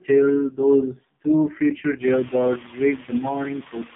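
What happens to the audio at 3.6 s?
From 3.59 s to the end, the noise suppressor cuts speech. It takes part of the speech for noise and turns it down by up to about 12 dB over roughly 200 ms, so it sounds swallowed and faint. The same processing pulls the background down by about 9 dB. Heavy AMR narrowband mobile codec damage also runs through this moment. Nothing passes above 3.7 kHz, and the coarse pulse-driven model gives a buzzy, synthetic texture that fits the 4.75 kbps mode.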